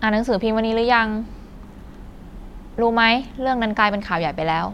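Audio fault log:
No fault is heard in this speech clip.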